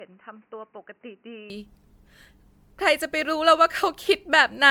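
From 0.0 to 1.5 s the input was likely switched to a poorer device. The narrower device passes nothing above 3 kHz, so the speech sounds dull and boxy, about 5 dB quieter, with new background noise about 45 dB down. It returns to full bandwidth at 1.5 s with no gap.

Throughout, the speech shows generation loss, likely from repeated lossy MP3 re-encoding, some fifteen passes, each at a rate that points to roughly 130 kbit/s. Each pass requantises the audio, so noise and spectral holes accumulate into a swirly, hollow smear with blurred attacks. Nothing remains above 19.9 kHz.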